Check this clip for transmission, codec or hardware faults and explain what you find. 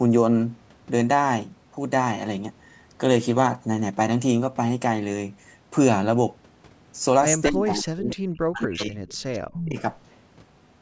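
Two echo-canceller faults appear in the last few seconds of this speech clip: leaked echo and suppression during double talk.

Echo leak, at 7.42 to 7.5 s, 9.08 to 9.14 s and 9.33 to 9.39 s. The likely cause is a far end on a loudspeaker whose echo canceller failed to remove everything its microphone picked up, so that residue returned down the line. Each scrap is a faint copy of the speech, 226 ms late, about 15 dB below the direct sound in the first instance and about 30 and 25 dB down in the later two.

Speech suppressed in double talk, at 7.5 to 8.17 s, 8.47 to 8.99 s and 9.49 to 9.78 s. When both ends were active at once, the canceller could not separate the local talker from loudspeaker echo and likely attenuated everything. The speech sinks by as much as about 40 dB, over a total of roughly 0.7, 0.5 and 0.3 s. The first dip follows directly on the leaked echo, and the band limit at 8 kHz from the call's microphone processing is present throughout.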